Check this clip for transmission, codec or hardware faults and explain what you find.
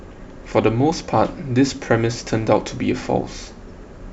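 One codec fault runs through the whole of this speech clip: the dull, gurgling, granular quality of MP2 compression. The cause is likely MPEG Layer II coding at a starved bitrate, around 80 kbps. Too few bits force whole upper sub-bands off, so they flicker in and out, and the remaining bands are coarsely quantised. Unlike a plain low-pass filter, the top end comes and goes rather than stopping cleanly, with grainy texture.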